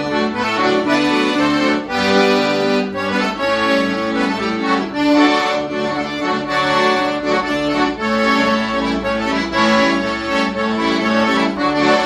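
No technical fault can be heard anywhere in the audio. Nothing in the sound points to a problem in how it was captured, processed or delivered.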